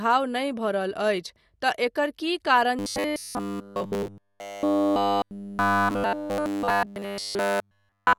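Robotic sound from repeated short buffers runs from 2.79 s to 8.18 s in this speech: audio likely arrived too seldom, so nearly every gap was filled by looping a roughly 10 ms slice, imposing a rigid 100 Hz metallic buzz.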